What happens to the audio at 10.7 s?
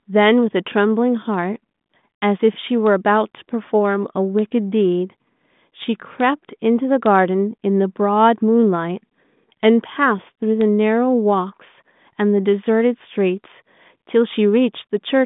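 Nothing goes wrong at 10.7 s: the speech there passes intact, carrying only the narrow telephone band of its 40 kbit/s G.726 ADPCM path, with nothing above about 3.8 kHz.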